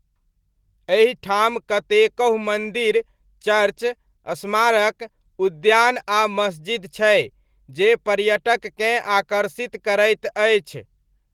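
No technical faults can be heard in this speech recording. The Opus voice compression at 20 kbps works in hybrid mode at full bandwidth, carrying sound up to about 20.2 kHz, and its coding leaves only a light mark on the audio.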